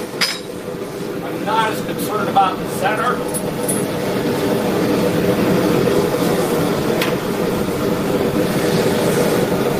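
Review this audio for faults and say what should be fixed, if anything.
No faults turn up in this audio, so nothing needs to be fixed.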